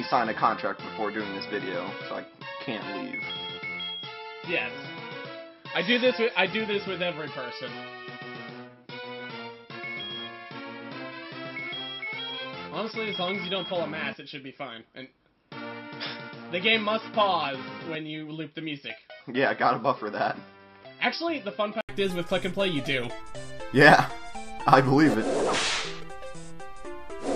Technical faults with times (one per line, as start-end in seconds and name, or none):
0.00-21.89 input switched to a poorer device